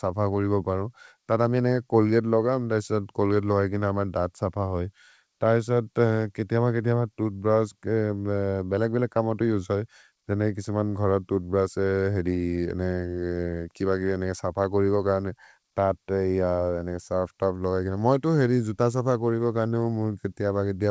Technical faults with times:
none

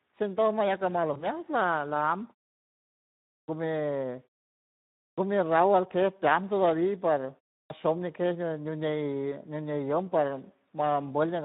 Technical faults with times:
0.00-11.45 Speex codec
1.13-1.25 VoIP packet loss concealed by the speech codec
7.62-7.70 clipped start after a pause

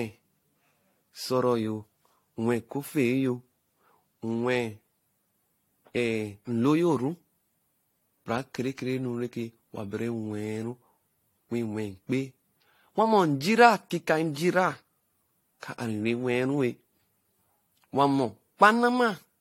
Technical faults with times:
0.00-19.41 generation loss

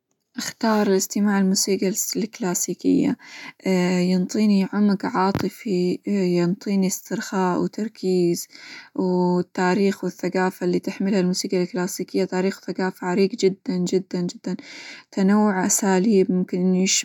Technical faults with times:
none

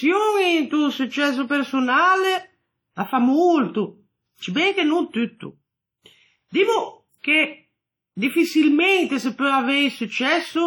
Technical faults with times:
0.00-10.66 WMA compression

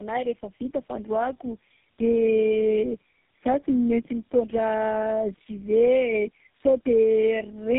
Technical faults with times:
0.00-7.78 tandem speech coding

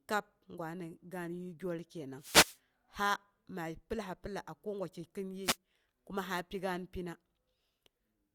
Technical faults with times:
2.17-2.59 wireless microphone noise hit
5.43-5.57 wireless microphone noise hit

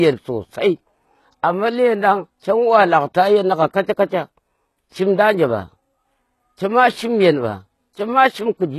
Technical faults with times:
0.00-8.79 HE-AAC compression

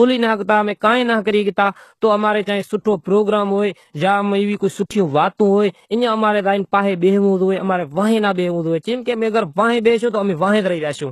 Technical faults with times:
0.00-11.11 HE-AAC compression

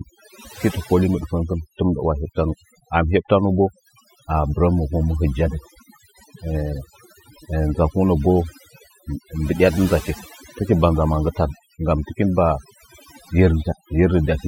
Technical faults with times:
0.00-14.47 overdone noise removal

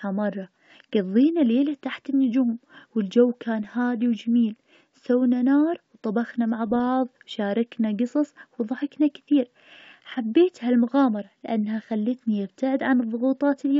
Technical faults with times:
3.64-3.71 bit errors on an ADPCM link
6.67-6.80 bit errors on an ADPCM link

